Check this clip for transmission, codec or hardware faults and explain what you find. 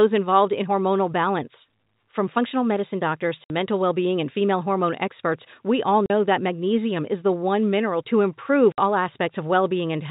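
Three short dropouts in the speech are packet loss filled with silence, at 3.44 s, 6.06 s and 8.72 s. Each gap follows a run of missing packets, and the receiver played dead air in their place. The gaps last 60 ms after "functional medicine doctors", 40 ms after "hormone experts we all" and 60 ms after "one mineral to improve". These lengths fit whole 20 ms packets. The abrupt cut-outs have hard edges, heard through the narrow telephone band of G.711 coding.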